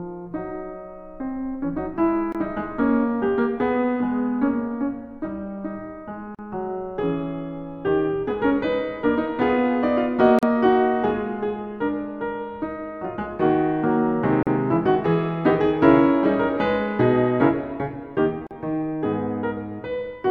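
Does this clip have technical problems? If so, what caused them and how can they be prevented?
Yes. The music drops out briefly at a gap at a join of encoded pieces, about every 4 s: roughly 24 ms at 2.32 s, then about 40 ms each at 6.35, 10.39, 14.43 and 18.47 s. Each is a short hole with smeared edges, after which the music carries on from where it stopped. That's what you get when separately encoded chunks are butted together with the encoder's start delay and end padding left in. To prevent it, encode the material as one continuous stream, or trim the delay and padding at every join before concatenating.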